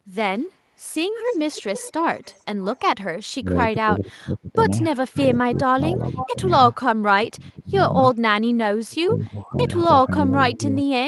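Echo leak appears in this speech recording at 0.39–0.43 s, 1.26–2.8 s, 5.2–5.59 s and 6.18–6.29 s. Each time, a copy of the talk returns about 459 ms late. It is barely there at first, about 40 dB under the speech, then about 20 and 25 dB down, and only about 10 dB down in the last brief scrap. The likely cause is a loudspeaker at the far end whose echo canceller let part of the microphone pickup slip back down the line. Speech suppressed in double talk follows at 3.41–6.39 s, 7.02–7.78 s and 8.71–10.85 s. The voice dips in pieces while the other side is also talking, by up to about 25 dB in the first two spans and about 30 dB in the last. Roughly one and a half seconds, under a second, and about a second of audio are affected. This is likely the echo canceller failing to tell the local talker from the returning echo and turning everything down together. Underneath, the band tops out near 12 kHz, which points to an Opus call path running at a moderate bitrate.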